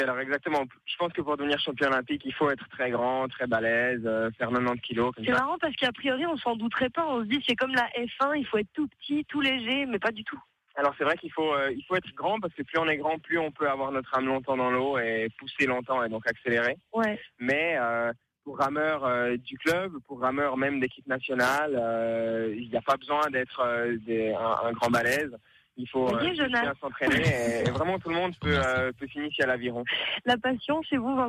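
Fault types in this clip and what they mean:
The signal stays continuous throughout, with nothing audible that points to a technical fault.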